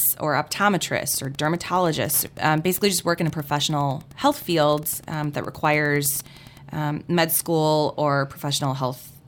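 From 1.13 s to 6.61 s, a steady ticking runs under the speech at about ten clicks per second, sitting roughly 25 dB below the voice and stopping just before "um med school or". This is Wi-Fi interference. A nearby Wi-Fi radio's beacon, repeating every 102.4 ms, couples into the audio circuit, where it is rectified into an audible pulse, and that fixed beacon interval is what gives the ticking its regular rate.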